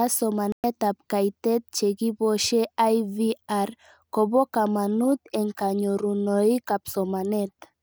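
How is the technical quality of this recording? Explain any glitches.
The recording has one clear glitch, a short gap near the start. From 0.52 s to 0.64 s the speech cuts to silence for about 116 ms, then resumes with "ab kaitet che kiposhe". This is likely a Bluetooth dropout: audio packets missed their delivery deadline to the headphones and were discarded, a loss that fits several consecutive packets. The playback stream kept running, so speech continues later in time rather than picking up where it stopped, leaving a hole.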